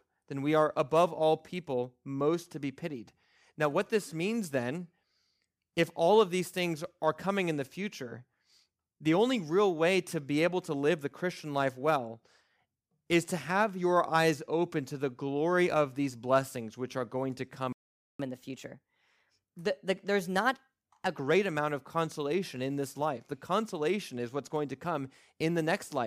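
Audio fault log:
17.73–18.19 s playback stall: right after "which are going to" the speech cuts out for about 0.47 s, then resumes where it stopped. The likely cause is a player that ran out of data or a blocked playback thread. The waveform shows a flat line, and the spectrogram a blank vertical band.
18.19–21.19 s catch-up at higher speed: the backlog is played out by resampling at 1.15 times normal speed, so the speech runs faster and about two semitones higher until it settles before "amount of consolation in". The spectrogram shows harmonics shifted upward and syllables squeezed closer together.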